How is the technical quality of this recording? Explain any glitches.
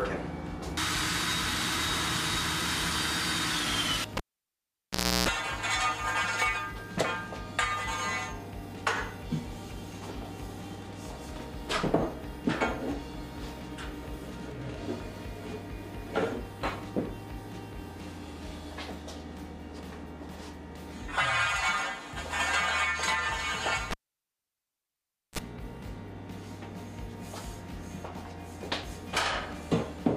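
The recording has two cable pulled and plugged in faults. At 4.17 and 23.91 s a live lead is disconnected and reinserted. There is a pop, then near silence for about 1.1 and 1.4 s, then a 60 Hz buzz (0.33 s, then 34 ms) while only the tip connects, and a second pop as the sound returns.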